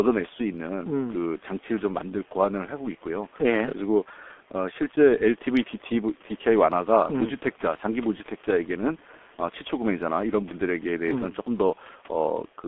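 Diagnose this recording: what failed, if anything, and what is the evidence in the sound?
The codec stage failed: G.723.1 coding runs through the whole recording, and the damage is heavy. The speech is muffled and hoarse, with smeared consonants. A spectrogram shows a hard ceiling at 3.5 kHz and a floor near 250 Hz, with blocky 30 ms frame smearing. The coarse spectral detail fits the 6.3 kbit/s mode. The call microphone processing's high-pass filter takes out only the lowest bass, which is normal.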